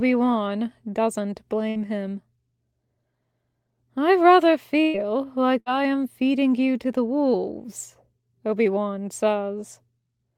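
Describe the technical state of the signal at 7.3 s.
At 7.3 s the speech signal is intact, with no fault audible at that moment.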